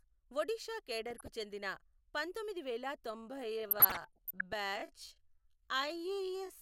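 DAB burbling appears from 1.09 to 1.28 s: a short patch of sub-band noise blips and level jumps over the speech. Weak digital radio reception let bit errors through the error correction, at a rate of well under one percent, and corrupted samples and scale factors in the MP2 stream made individual sub-bands leap in level. The length of the patch fits about ten damaged audio frames.

A time-stretched section begins at 3.1 s and runs to the end. The pace drops abruptly to roughly 54 percent of normal speed, yet the pitch of the speech stays unchanged. This is likely software slowing the audio to fill a set length, keeping pitch by repeating short slices of sound.

DAB burbling returns from 3.63 to 4.53 s, inside the slowed passage. The same sub-band blips and jumps sit over the speech for nearly a second, which points to about 38 corrupted frames.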